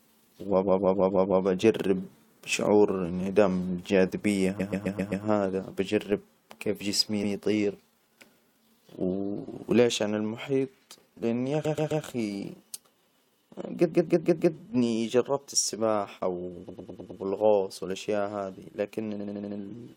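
Right at 0.62 s there's a stutter of repeated frames: a short block of about 0.16 s plays over and over until 1.4 s, just before "أجرب شعور". The same fault returns at 4.59 s (0.13 s blocks), at 7.23 s just after "كيف جسمي" (a single 0.1 s repeat), at 11.64 s, at 13.91 s, at 16.68 s after "جربت السباحة", and at 19.19 s. Each time a run of coded frames got sent again, stretching the speech. At 6.12 s a DC step drops in, the zero line jumping so you hear a low thump, then the offset fades away as a 20 Hz high-pass bleeds it off.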